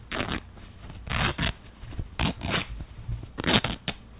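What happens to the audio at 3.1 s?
Nothing goes wrong at 3.1 s; the sound plays through that moment intact.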